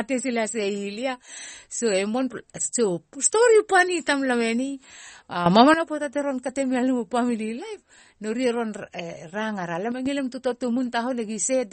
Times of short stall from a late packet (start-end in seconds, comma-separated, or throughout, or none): none